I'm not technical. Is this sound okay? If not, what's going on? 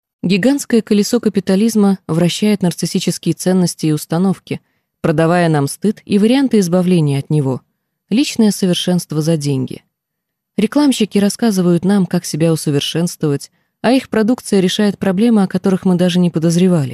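Yes, this sound is okay, and there's nothing wrong to point out. You can listen without worrying about any glitches or interruptions.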